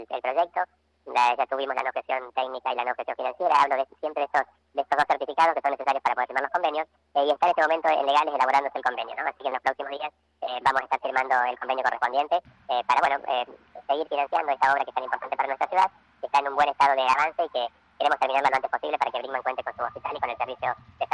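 Throughout the clip there is a wrong sample rate fault: the samples are being clocked out half again as fast as they were captured, with no resampling in between. That fits material recorded at 16 kHz and played back at 24 kHz. Because speed and pitch are tied to the same clock, everything runs 1.5 times too fast and sits about 7 semitones higher, so the sound comes across as hurried, squeezed and unnaturally bright from start to finish.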